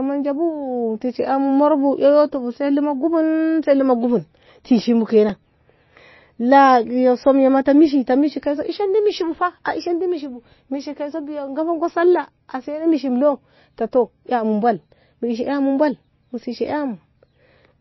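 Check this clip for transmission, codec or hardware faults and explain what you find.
Two problems: a codec problem across the whole speech clip and one tiny playback glitch.

Throughout, the sound has plainly audible MP3 compression damage, likely from a very low bitrate encode. Nothing comes through above 5.8 kHz, and weak detail flickers, giving a watery, swirly edge to sibilants.

At 5.29 s there's a repeated buffer: a roughly 1.45 ms chunk plays twice, which fits a 64-sample buffer, so it lands as a click or brief buzz.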